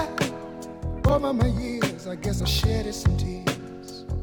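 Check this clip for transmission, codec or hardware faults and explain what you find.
Two places show compressed frames skipped. At 1.07 to 1.12 s, roughly 70 ms of audio is jumped over. At 2.39 s, about 20 ms goes. Whole coded frames never reach the output, so the sound leaps ahead.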